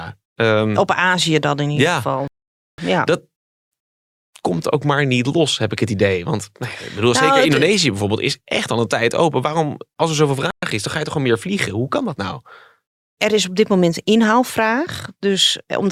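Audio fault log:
2.28 to 2.79 s and 10.51 to 10.63 s, Bluetooth stall: packets were likely held up by wireless interference, so the headphones' buffer emptied and playback halted until resent data arrived. The speech drops to dead silence for about half a second in the first stall and about 0.12 s in the second, then resumes abruptly. The gaps are clean cuts rather than fades, as the output simply stops and restarts.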